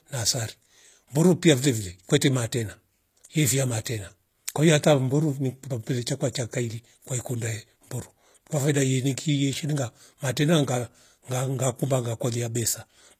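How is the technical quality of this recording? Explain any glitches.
The recording has plainly audible codec damage throughout the speech. The s sounds come across gritty and metallic, and nothing is present above about 14.9 kHz. This is likely HE-AAC compression at a low rate, one that fits roughly 24 kbps. The encoder keeps only the lower spectrum and synthesises the treble by copying lower bands upward under a coarse envelope, so the rebuilt highs are misaligned with the real harmonics.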